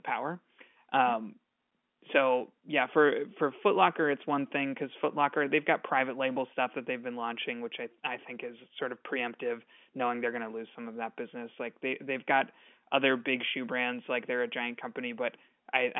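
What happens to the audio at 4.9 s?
Nothing goes wrong at 4.9 s; the speech there passes through intact, carrying only the narrow telephone band of the G.711 line.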